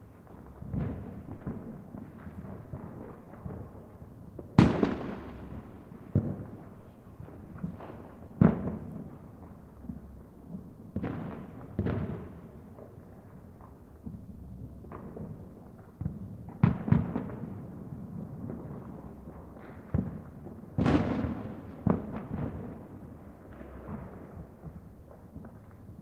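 The sender's audio clock runs about 1.5% slower than the receiver's, a clock drift between sender and receiver, so the jitter buffer keeps draining and timing hiccups recur through the sounds. From 0.89 s to 25.47 s, repeated timing corrections insert short repeated pieces at uneven intervals, adding around 0.4 s overall.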